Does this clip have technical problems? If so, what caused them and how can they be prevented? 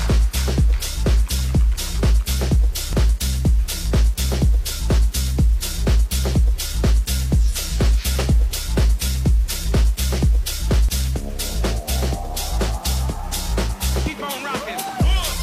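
Yes. Throughout the clip there is a grainy, signal-following distortion sitting roughly 30 dB below the signal. This points to low bit depth without dither, likely from rounding to around 6 bits, so the error tracks the waveform instead of forming neutral noise. To prevent it, keep a higher bit depth and apply dither whenever reducing word length.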